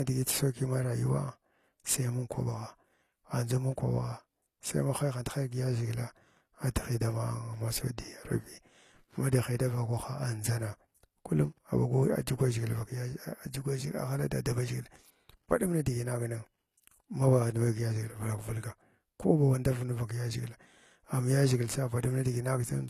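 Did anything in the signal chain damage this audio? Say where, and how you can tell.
Yes, at the codec stage, and it runs through the whole speech clip. The treble sounds bright but synthetic, with lispy, gritty s sounds and nothing above 19 kHz. That's likely HE-AAC compression rebuilding the top octave from copied lower bands, which fits a low bitrate around 24 kbps.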